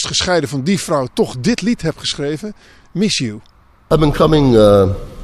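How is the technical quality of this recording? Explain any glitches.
No audible technical faults.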